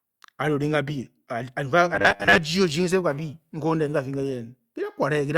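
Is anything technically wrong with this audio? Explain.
Yes. From 1.95 to 2.40 s the speech turns into robotic sound from repeated short buffers. New audio likely arrived too slowly, so about half that stretch was filled by looping the last 10 ms, which stamps a rigid, metallic 100 Hz buzz over the speech.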